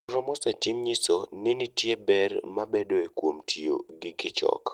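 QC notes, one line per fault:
No faults found in this speech clip. Nothing in it calls for a QC note.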